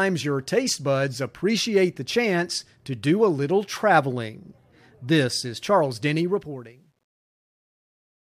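From 6.21 s to 8.40 s, the speech fade-out shows truncation distortion: the volume stage drops undithered to coarse steps, which fits roughly 11-bit resolution. Worst from 7.04 s, the tail turns gritty, where a clean fade would simply thin away.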